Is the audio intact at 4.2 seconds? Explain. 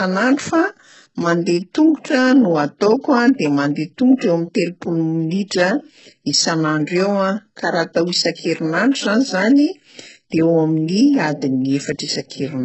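No. Pre-echo spans 4.18 to 4.21 s: the codec spread quantisation noise across a whole transform block, so the noise meant for a sharp attack also fills the quiet 28 ms before it. You hear a short hiss just ahead of the onset, and the attack sounds blunted.

The same moment also carries heavy coding damage. The treble sounds gritty and synthetic, with nothing above 8 kHz, which fits HE-AAC compression at a very low bitrate around 8 kbps. The treble is likely rebuilt by spectral band replication rather than coded directly.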